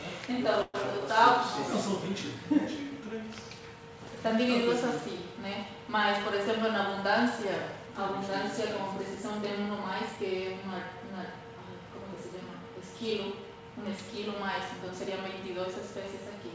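Call audio freeze, 0.62 to 0.76 s: the last sound carries on as a short buzz or hiss of about 120 ms before the audio resumes where it stopped. The likely cause is held-up packets draining the jitter buffer, which delays everything after this point by about 120 ms.

Jitter buffer speed-up, 8.88 to 10.17 s: the receiver trims away tiny pitch-period slices over this stretch, around 70 ms in total, so the audio runs at 106% speed with unchanged pitch and sounds slightly rushed. This shortens the delay built up earlier, all heard through a G.722 path with nothing above 8 kHz.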